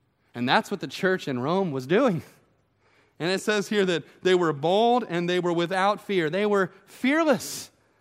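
From 3.45 s to 5.73 s the speech slows by about 6.5% and drops roughly 116 cents, just over a semitone, then snaps back to normal. This is likely a drift correction step, where clock-matching software briefly changed the playback rate to rebalance its buffer.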